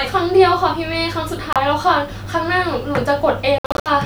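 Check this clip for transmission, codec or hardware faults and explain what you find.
Two dropouts interrupt the speech, most likely Bluetooth dropouts. At 1.53 to 1.57 s about 30 ms vanishes. From 3.58 to 3.90 s roughly 210 ms goes missing in several scattered gaps, the longest 61 ms. Packets arriving late at the headphones are discarded, so the output falls silent and then resumes further on, as if the speech had kept playing. It sounds like clipped-out stutters. A waveform shows silent holes with abrupt or briefly faded edges, and a spectrogram shows full-band vertical blank strips.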